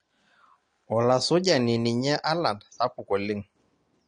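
From start to end, the speech sounds dull and smeared. Nothing survives above 9.7 kHz. Sibilants fizz and held sounds warble. This is plainly audible AAC compression damage, likely from a starved bitrate near 32 kbps, which trims the top band and leaves spectral holes.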